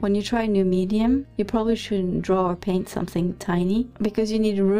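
From start to finish the audio carries overlap-add ripple: it was split into windowed frames and rebuilt with an overlap whose window gains do not add up evenly, so the level swells and dips by about 6 dB once per frame, at a rate of around 200 Hz. It sounds like a metallic, robotic buzz with extra tones around each note. On a waveform the envelope shows a regular scalloped pattern, and a spectrogram shows sidebands spaced about 200 Hz around strong components.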